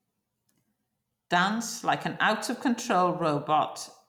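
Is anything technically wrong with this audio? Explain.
No, nothing technically wrong can be heard here.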